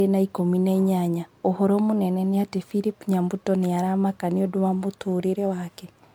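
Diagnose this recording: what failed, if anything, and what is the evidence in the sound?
Codec stage: swirly, hollow smearing and blurred attacks throughout point to likely generation loss, about ten re-encodes fitting 128 kbit/s MP3, each pass requantising anew.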